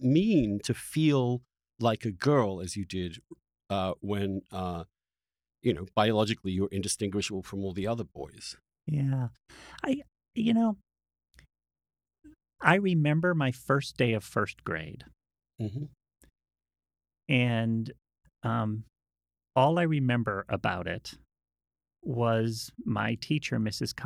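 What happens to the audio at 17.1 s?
Nothing goes wrong at 17.1 s; the speech carries on intact through that moment, with no dropout, click or other break in the signal.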